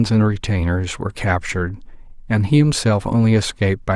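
No technical faults are audible anywhere in this speech recording.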